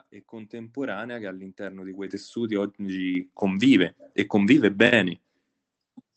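At 2.07 s the microphone volume is stepped up: the call software judged the input too quiet and raised the device gain by about 8 dB in a single jump, then did it again at 3.15 s by about 5 dB. Speech and background noise get louder together, with no fade. On a waveform the envelope widens abruptly at each point; on a spectrogram every band brightens at once, up to the roughly 8 kHz ceiling set by the call codec.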